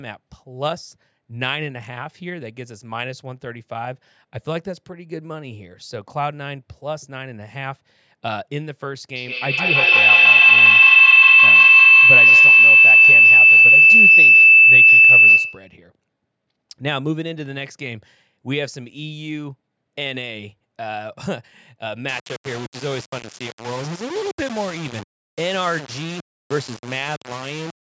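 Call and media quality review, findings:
Feedback howl, 9.16–15.84 s: two devices sharing one room on the call, mic-to-speaker loop gaining level on each trip. Repeats grow instead of fading, narrowing to a howl near 3 kHz, pulsing roughly every 150 ms, peaking about 16 dB above the speech.

Low bit depth without dither, 22.09–27.91 s: likely requantisation by rounding with no dither, consistent with a 4-bit signal. Rounding error follows the speech, giving grainy, signal-dependent distortion only around 10 dB below it. Quiet passages turn gritty.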